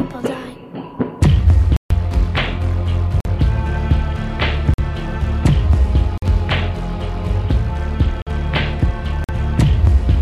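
The audio has six blocks of digital silence: 1.77–1.90 s (139 ms), then 46 ms holes at 3.20, 4.74, 6.18, 8.22 and 9.24 s. These fit an unfilled 2048-sample output buffer, and they cut out abruptly with no fade, unlike a level dip.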